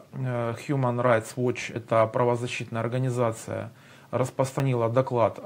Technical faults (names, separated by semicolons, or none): dropped buffer (overrun)